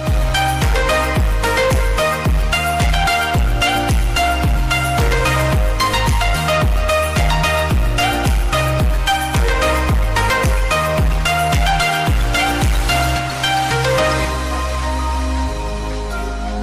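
Hard clipping runs through the whole clip. The signal arrives roughly 11 dB hotter than the stage can pass, so around a fifth of the samples are cut flat at the ceiling. Those squared-off peaks generate high harmonics, heard as a harsh, continuous fuzz on every loud passage.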